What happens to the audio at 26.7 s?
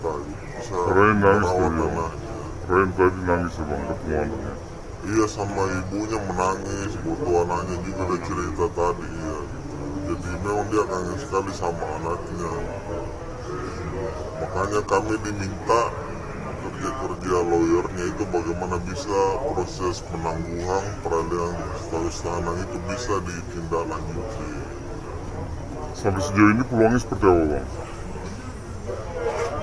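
At 26.7 s the sound is slow and low, running at 0.689 times speed and about 6.45 semitones flat throughout. This wrong sample rate fits 32 kHz audio played back at 22 kHz.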